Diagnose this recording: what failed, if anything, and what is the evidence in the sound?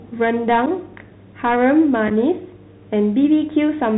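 Speech sounds muffled and narrow, with scratchy s sounds and granular hiss throughout. At the codec stage, a Bluetooth CVSD headset codec at 64 kbps removes everything above 4 kHz.

Short, abrupt holes occur at 0.66 s and from 2.08 to 2.12 s. This is unconcealed Bluetooth headset packet loss on the wireless link, pointing to a few dropped packets.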